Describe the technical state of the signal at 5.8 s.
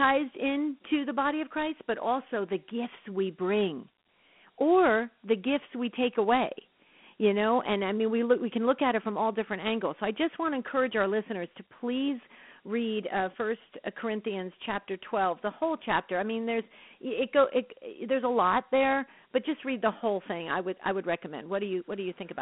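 At 5.8 s the speech carries Dialogic VOX ADPCM coding, present across the whole clip rather than at that instant alone. The 4-bit adaptive steps, which fit 32 kbps at 8 kHz, quantise coarsely, leaving a plainly audible gritty hiss that rises and falls with the speech. The band runs roughly 200 Hz to 3.4 kHz, with nothing above 3.9 kHz. Unlike a steady background hiss, the grain tracks the speech level instead of sitting steady underneath.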